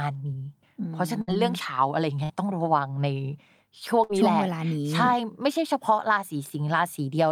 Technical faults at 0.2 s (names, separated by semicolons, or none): none